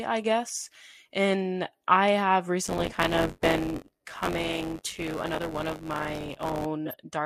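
At 0.80 to 0.83 s, a compressed frame with flipped bits was decoded anyway, a corrupt frame decoded fault that misplaces energy across frequencies and is heard as a brief chirp, squeak, blip or burst of noise in the speech. From 2.64 to 6.67 s, buffer tearing sets in: the ring buffer's writer and the hardware reader have drifted so that they cross inside every period. A small slice of audio from roughly 20 ms earlier is spliced in with hard joins, producing a robotic buzz at 93.8 Hz under the speech, which fits a 512-sample buffer. At 6.86 to 6.95 s, another corrupt frame decoded event damages a few consecutive frames, giving a longer disturbance.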